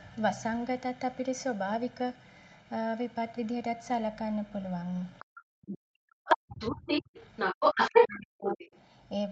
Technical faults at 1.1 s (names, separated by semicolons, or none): channel delay (comb filtering)